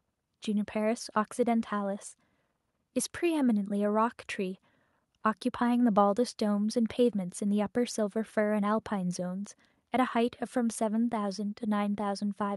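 No technical faults are audible.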